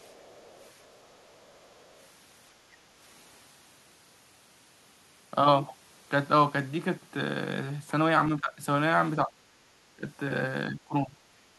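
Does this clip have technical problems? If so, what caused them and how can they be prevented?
Yes. Faint traces of another voice sit under the speech from 0.00 to 1.33 s and again from 1.55 to 1.85 s, around 30 to 35 dB below the main talker. This is other side's voice leaking through, likely because the far end played on a loudspeaker and the echo canceller left residual echo in the microphone signal. A spectrogram shows weak, smeared harmonic traces beneath the main voice. Better acoustic isolation, such as a headset, or a stronger echo canceller would prevent it.

Between 8.40 and 8.62 s, 9.25 and 9.33 s, 9.97 and 10.02 s, and 10.70 and 11.16 s, the talker's level dips by roughly 10 to 15 dB in short bites. This is speech suppressed in double talk, likely where both sides spoke at once and the canceller turned everything down. The waveform shows notched envelopes. Tuning the canceller's double-talk detection, or using a headset so there is no loudspeaker echo, would avoid it.

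From 9.61 to 9.69 s, the room sound drops by about 6 dB for about 70 ms and then returns. This is background gated by the echo canceller, which clamped the microphone while the loudspeaker was active. On a spectrogram it looks like a brief vertical gap in the noise floor, and the waveform shows a small dip in the background level. Gentler suppression, or comfort-noise fill during gating, would prevent the hole.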